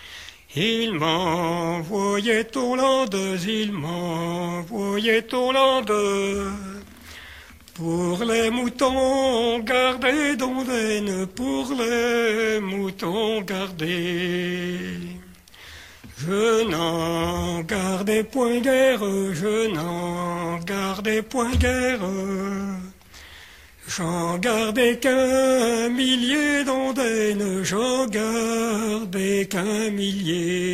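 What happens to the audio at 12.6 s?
Nothing goes wrong at 12.6 s; the audio plays through that moment intact, with no dropout, click or other fault.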